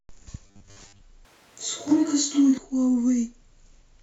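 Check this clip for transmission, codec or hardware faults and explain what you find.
Two faults are audible in this speech clip.

From 0.47 to 1.02 s the voice becomes a rigid, metallic buzz at 100 Hz that loosely tracks the speech, with most of the real sound missing. This is robotic sound from repeated short buffers, likely from audio arriving too seldom so the last 10 ms gets replayed.

From 1.25 to 2.58 s the voice abruptly turns roomy and hollow, with thinner bass, little change in level, and faint room noise well below it. This is a switch to a distant microphone, likely because the close microphone's signal dropped out.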